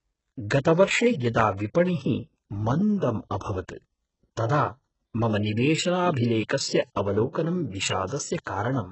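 Throughout the speech, the treble above the low band sounds synthetic: sibilants turn gritty and lispy, and nothing reaches past 8 kHz. This is likely HE-AAC compression at a very low bitrate, around 8 kbps. Band replication rebuilds the top by copying lower bands. Unlike plain low-pass dullness, the highs stay bright but wrong.

From 8.45 to 8.47 s comes pre-echo: a brief hiss, about 23 ms long, arrives just before a sharp attack and softens it. The codec has spread quantisation noise across the whole block ahead of the onset. Unlike a click or reverb tail, the smear leads the transient rather than following it.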